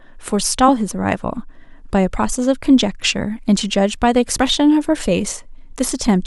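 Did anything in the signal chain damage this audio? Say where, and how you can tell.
Yes. Damaged data in a compressed stream corrupted the audio at the codec stage, where the encoded speech was stored or carried. Bad bytes in the compressed data made the decoder misread those frames and lose sync while it searched for the next valid frame header. Each hit sounds like a short, unnatural chirp or blip cut into the speech. The first runs from about 0.68 to 0.70 s, and the second is at 4.37 s.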